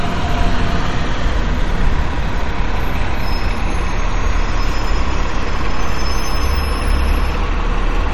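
MP3 compression runs throughout the clip, with plainly audible damage and nothing above 17.4 kHz. Short of bits, the encoder likely dropped the treble and let weak frequency lines flicker between frames, which fits a low bitrate near 45 kbps and leaves a watery, swirly texture.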